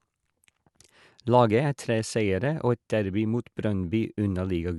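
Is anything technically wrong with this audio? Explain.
No, nothing is technically wrong with this speech recording. There is no fault to point to at any moment in the audio.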